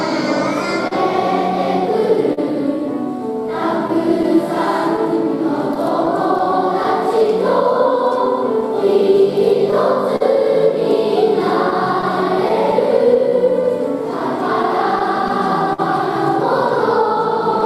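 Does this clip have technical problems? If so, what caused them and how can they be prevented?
Yes, there's clock drift between sender and receiver throughout, with the sender's clock running roughly 3 percent slow. That keeps starving the receiver's jitter buffer, so small timing hiccups crop up unevenly across the whole clip. Locking both ends to a common clock, or resampling adaptively at the receiver, would prevent it.

There are three short stalls from a late packet, at 0.87 to 0.93 s, 2.33 to 2.39 s and 10.16 to 10.22 s. Each time the buffer ran dry and the last sound got held for about 40 ms before carrying on, with nothing lost. A slightly deeper jitter buffer would ride these out.

From 3.52 to 13.62 s you get repeated timing corrections. The receiver keeps padding with tiny repeated slivers to keep up with the slow sender, stretching things to about 99 percent speed and adding around a tenth of a second overall. 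Fixing the clock mismatch removes the need for these edits.

Scattered short gaps show up from 3.88 to 8.63 s and again from 11.70 to 15.80 s, about ten small holes in each stretch. They're patched by continuing the previous sound, so you hear brief ticks or smears, mostly around 10 ms, though the longest in the later stretch is about 50 ms. Better network prioritisation and forward error correction would help.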